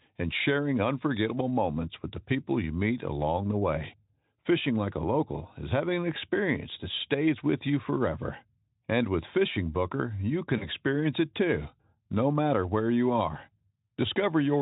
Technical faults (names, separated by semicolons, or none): VoIP packet loss concealed by the speech codec